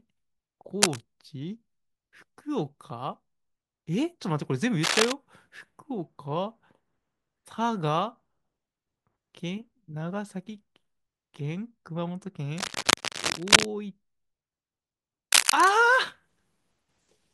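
A worn cable, connector or control being moved is the likely cause here: its contact resistance jumps around as it shifts, and the signal picks up dense, irregular bursts of noise. This cable scratch noise appears four times in the speech, from 0.82 to 1.02 s, 4.83 to 5.12 s, 12.57 to 13.67 s and 15.32 to 15.70 s. It sounds like a harsh rustling scratch over the voice, a little louder than the speech in three bursts and about level with it at 4.83 s.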